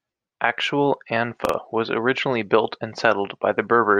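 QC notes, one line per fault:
1.45–1.54 s, chunks out of order: one block of about 43 ms plays one block late, swapped with its neighbour just before "was originally built and", so three hard joins give a brief jumbled stutter.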